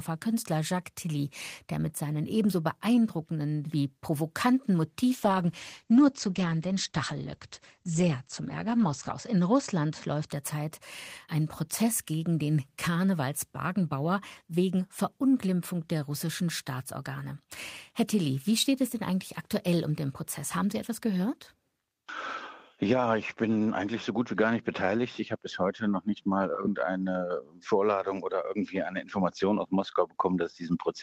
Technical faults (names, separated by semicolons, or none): call bitrate drop